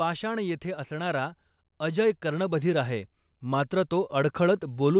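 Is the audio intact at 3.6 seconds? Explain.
No. Automatic gain rising runs from 0.22 s to the end. The gain control judged the input too quiet, so speech and background swell together.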